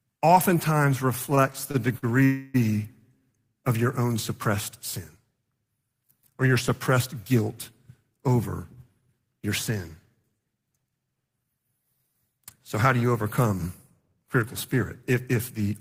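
Repeated stalls (stutter) run from 1.19 to 2.04 s. Packets arrived late, so the jitter buffer emptied five times. Each gap, the longest 44 ms, was filled by extending the last sound, about 111 ms in all. The speech drags and hiccups, with nothing lost.

A call audio freeze follows at 2.24 to 2.56 s. The sound hangs as a continued buzz or hiss for about 0.3 s, never dropping to silence, then picks up where it stopped. The likely cause is packets held up in transit, leaving the buffer empty.

Jitter buffer speed-ups occur at 8.28 to 9.79 s (107%, roughly a tenth of a second removed), 10.23 to 11.45 s (114%, about 0.2 s) and 12.43 to 13.03 s (106%, around 50 ms). The receiver trimmed tiny pitch-period slices to shrink a backlog, so speech sounds hurried at unchanged pitch.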